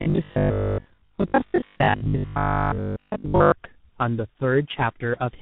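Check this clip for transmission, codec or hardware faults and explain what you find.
The clip has two faults: a coding chain that degrades the whole recording, and a robotic stretch in its first three and a half seconds.

Tandem speech coding runs throughout. The speech sounds rough, muffled and warbly. This fits a call that was decoded and re-encoded at each link, passing through a low-rate G.723.1-style coder, then G.711 mu-law, and ending in CVSD. Each coder worked on the already damaged output of the one before, so the losses stacked.

Robotic sound from repeated short buffers lasts from 0.02 to 3.52 s. The speech turns into a rigid, metallic buzz at 50 Hz that only loosely follows the words. The likely cause is late-arriving audio that the software covered by looping the last 20 ms chunk, which fits a 20 ms buffer. Each repeat displaced real signal, and roughly 70 percent of that stretch was repeated material rather than fresh audio.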